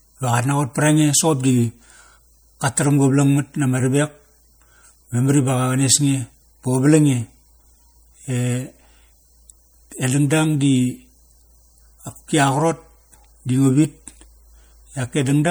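From start to finish the speech has a plainly audible watery, swirly texture, with chirpy s sounds and softened attacks, most likely from MP3 compression at a rate that fits around 64 kbps. Treble still reaches about 21.1 kHz, but weak detail flickers frame to frame.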